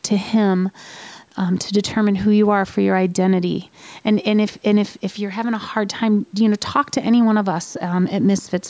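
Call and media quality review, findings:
No faults found: the speech passes through normal call microphone processing, with the lowest bass trimmed by the high-pass filter and no content above 8 kHz.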